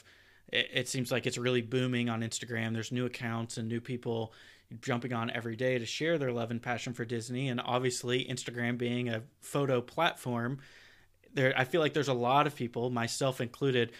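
No technical faults can be heard anywhere in the speech. Nothing in the recording calls for a time stamp or a cause.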